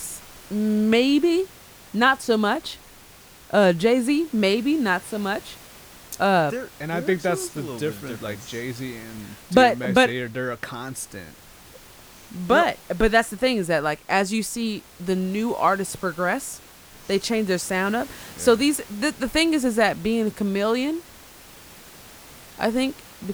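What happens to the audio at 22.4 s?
At 22.4 s the speech carries on intact, with only the steady room noise about 24 dB beneath it.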